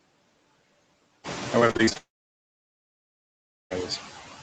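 Noise suppressor artifacts run through the whole speech clip. The suppressor pulls down bands it judges to be steady noise by about 20 dB, frame by frame. When the room noise rises around 1 s, the residue between syllables pumps, sinking between words and rising under them.

From 1.59 to 1.97 s, repeated packet loss gives a choppy, robotic stretch. Seven short gaps, the longest 39 ms, are each patched by stretching the previous sound. Those patches cover about 42% of the span, so the result is choppy and broken rather than continuous.

A long network dropout follows, most likely an outage, from 1.97 to 3.72 s. The concealment extends the last sound briefly as a fading buzz, then leaves about 1.7 s of silence. Audio resumes at 3.72 s with the missing stretch simply gone.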